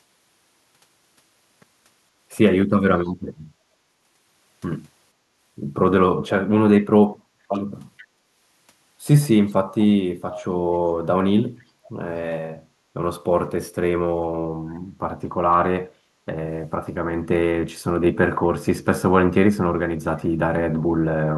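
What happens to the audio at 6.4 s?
Nothing goes wrong at 6.4 s; the speech there plays through intact, with no dropout, click, distortion or other fault.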